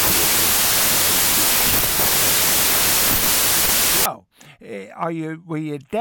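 Speech, with a wrong sample width from 0 to 4.06 s, before "eh are you": loud noise buries a slowed, lowered voice running at two-thirds speed, which points to 24-bit data read as 16-bit. A byte-order swap also gives harsh noise but keeps speed and pitch.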